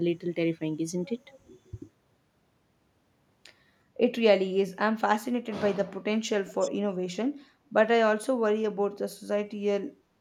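At 6.53 to 6.71 s there is an echo leak. An echo canceller at a loudspeaker end likely failed to remove speech its microphone picked back up. A faint copy of the speech returns 371 ms late, roughly 20 dB below the original.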